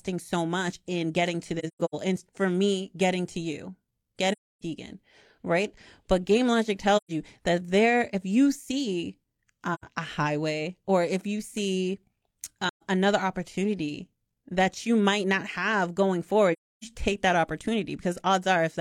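Speech with AAC frame loss with muting. Soft-edged dropouts fade out and back in at 1.59, 4.32, 6.96, 9.74, 12.68 and 16.53 s, lasting 85 to 300 ms. Each gap fits lost frames of about 43 ms replaced by silence. The first gap is broken up, with its longest silence near 150 ms.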